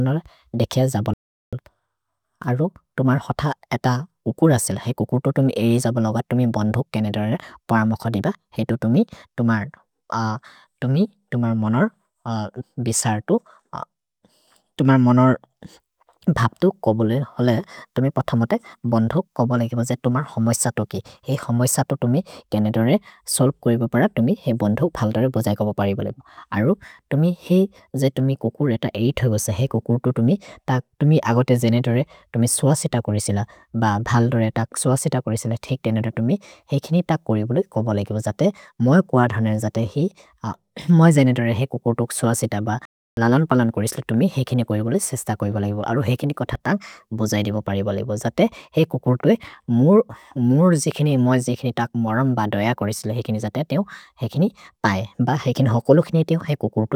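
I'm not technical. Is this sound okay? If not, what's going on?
No. The speech cuts out into silence twice: from 1.14 to 1.53 s, about 0.39 s, and from 42.85 to 43.17 s, about 0.32 s, just before "ललन् पलन् कोरिसिल तुमि". This is a playback stall, likely the player running short of data and pausing until it caught up.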